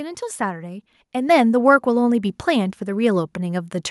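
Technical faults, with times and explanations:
1.29 s, microphone volume stepped up: the speech and the background noise jump about 6 dB louder together, in a single step. The call software judged the microphone too quiet and raised the device's input volume at once, so the level change has no gradual ramp.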